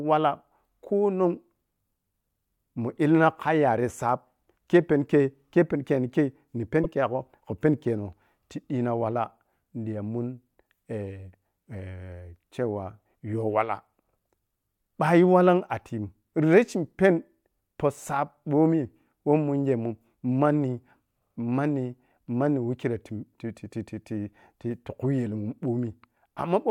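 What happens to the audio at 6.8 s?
Between 6.83 and 6.86 s, just after "kei ni kei ni" and before "kegho khu peni keno", the speech has repeated frames: a 24 ms slice plays twice, which fits a single compressed frame written or sent a second time. It sounds like a tiny stutter. A waveform shows the same short shape twice, 24 ms of added time.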